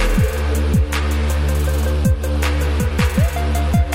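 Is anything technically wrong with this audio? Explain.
No, nothing technically wrong can be heard in this audio, as the signal stays intact and steady throughout.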